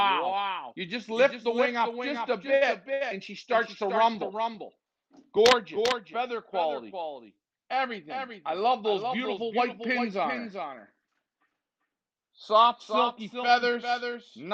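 Throughout, a doubled audio track: a full-band copy trails about 0.4 s behind, roughly 5 dB quieter, with no decay. A second, slower capture path is the likely cause.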